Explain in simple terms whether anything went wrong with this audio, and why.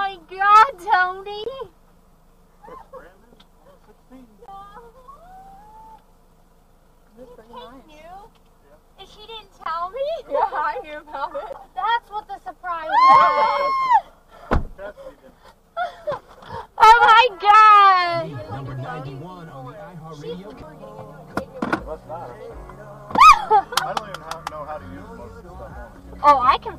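Two things went wrong. The first is a block of digital silence, heard at 1.44, 4.46, 9.64 and 11.53 s. The sound drops to nothing for about 23 ms, or 15 ms at 11.53 s, which fits a 1024-sample buffer arriving late. The sound cuts out and back with no fade.

The second is compressed frames skipped, at 12.82 s and from 17.51 to 17.55 s. Each time the audio jumps ahead by about a twentieth of a second. Unlike the silent gaps, there is no hole.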